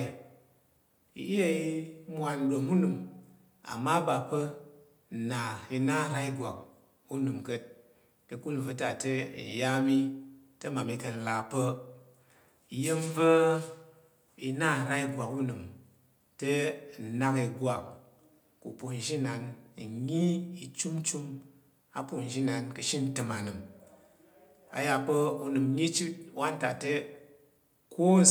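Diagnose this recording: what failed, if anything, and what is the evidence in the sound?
Nothing to diagnose here, as far as I can hear: no stage of the chain has left any mark on the speech.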